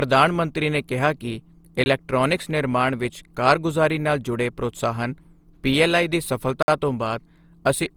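Across the whole recording the speech has a swirly, smeared, hollow quality, with consonant onsets softened and a watery texture on sustained sounds. The likely cause is generation loss: repeated decode and re-encode passes through a lossy codec, consistent with Opus at around 48 kbit/s applied a few times. Each pass requantises on a shifted frame grid, so the artefacts build up beyond what that bitrate alone would produce, even though the band still extends to about 20.3 kHz.

From 1.84 to 1.86 s, right after "ਮੰਤਰੀ ਨੇ ਕਿਹਾ ਕਿ", a block of digital silence drops out 20 ms of audio. The signal falls straight to silence and returns with no fade. The second block of digital silence runs from 6.63 to 6.68 s, following "ਜੁੜੇ ਪ੍ਰੋਤਸਾਹਨ ਪੀਐੱਲਆਈ ਦੀ". At about 55 ms it is long enough to hear as a brief hole. Both gaps point to an output buffer that was not filled in time.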